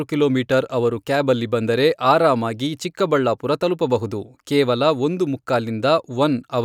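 No technical faults are audible.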